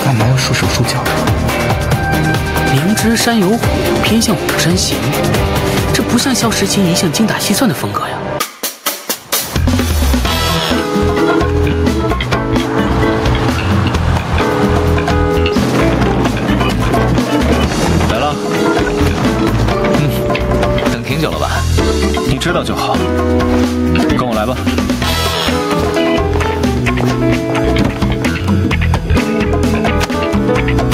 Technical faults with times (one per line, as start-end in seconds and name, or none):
0.00-30.94 gain pumping